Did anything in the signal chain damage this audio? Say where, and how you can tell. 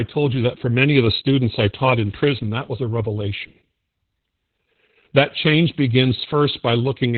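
Yes, at the codec stage: heavy Opus voice compression runs through the whole speech clip. Nothing exists above 4.2 kHz, and the voice sounds muffled, hoarse and slightly robotic, which fits narrowband SILK at around 8 kbps. A plain low-pass filter would only dull it, without this coarse, buzzy excitation.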